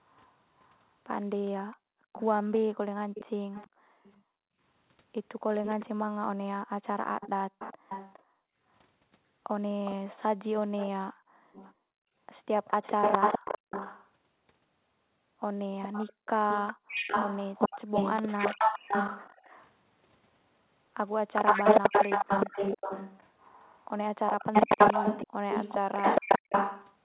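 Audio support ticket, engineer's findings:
Echo leak: delayed copy of speech about 411 ms behind the original, at 0.03–14.11 s, 15.82–19.72 s and 21.35 s to end. Copy starts below the direct speech, reaches equal level, then ends louder. Likely cause: the far end's loudspeaker output is reaching its microphone and leaking past the echo canceller.

Background gated by the echo canceller: room tone dips by up to about 40 dB within 1.61–4.59 s, 6.64–8.57 s, 11.11–13.7 s and 16.13–16.88 s, affecting roughly 1.5 s, 0.5 s, 1.0 s and 0.3 s in total. The canceller clamps the microphone during loudspeaker playback, then releases. Band-limited to 4 kHz, which fits G.711 on the call path.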